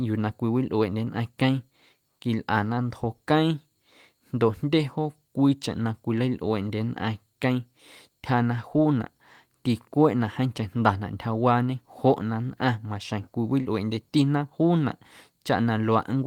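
Short concealed packet loss occurs at 13.61 to 13.67 s in the speech. About 40 ms of the stream failed to arrive in time for decoding, and the receiver covered roughly 38 ms of that gap by extending the preceding sound, repeating its pitch where it was voiced or substituting shaped noise where it was not, before fading back into the genuine signal. The result is a momentary smear or wobble, with a brief consonant possibly swallowed.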